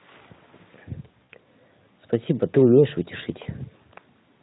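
At 1.23 s the speech breaks for about 60 ms, which fits three lost 20 ms frames, and the gap shows VoIP packet loss concealed by the speech codec. The decoder, here running Speex at 15 kbps with light coding damage, keeps repeating its last pitch and spectral shape at falling gain. This makes a short, smeared buzzy tone or coloured noise that fades out. A second, 20 ms gap at 3.43 s sounds the same. On a spectrogram the harmonics run flat and dim. The waveform shows repeated, decaying periodic cycles.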